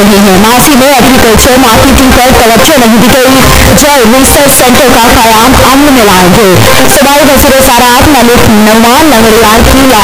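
From start to finish the audio is buried in constant loud distortion, with quiet passages as loud as strong ones. That's likely signed and unsigned mixed up in what sounds like 8-bit audio: the top bit flips, so every zero crossing jumps across the full range.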